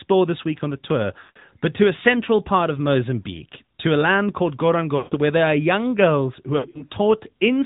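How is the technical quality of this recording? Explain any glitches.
Quality's fairly rough: it's phone-grade speech with three short dropouts.

Throughout, it's the AMR narrowband mobile codec. Nothing above 4 kHz survives, and the low-pulse vocal model leaves a plainly buzzy, synthetic edge, consistent with a mid-rate mode around 10 kbps.

Lost AMR speech frames hit at 1.20–1.37 s (about 160 ms) and 4.98–5.16 s (about 140 ms). The decoder stretches the last good frame while fading it, so the speech smears and sinks toward silence before returning rough. At 6.58–6.85 s the losses are scattered, with the longest gap 60 ms, giving choppy warbles.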